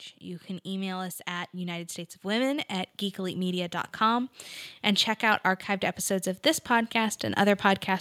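From 0.23 s to 5.51 s the speech and the background behind it swell together, climbing about 9 dB over those five seconds. This is automatic gain rising: the gain control judged the input too quiet and kept turning it up gradually.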